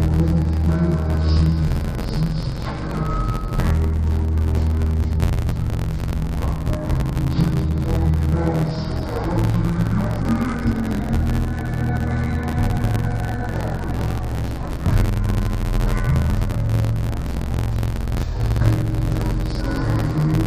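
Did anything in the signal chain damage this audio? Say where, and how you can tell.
Yes: the whole clip sounds dull and robotic with a buzz near 86 Hz. This is interleaved audio read as planar in the buffer handling, which fits 512-sample blocks of about 11.6 ms.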